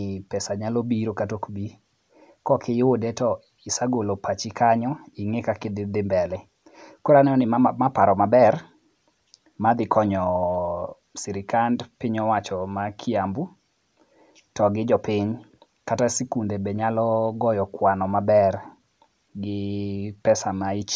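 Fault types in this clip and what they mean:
No technical faults can be heard, and the speech signal has unbroken continuity for its whole duration.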